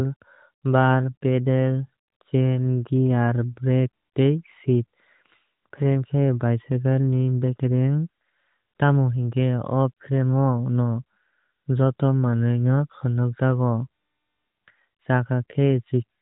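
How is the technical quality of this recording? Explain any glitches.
No glitches: the speech carries the AMR narrowband mobile codec's 4 kHz ceiling and only light coding colour, which fits its 12.2 kbps mode.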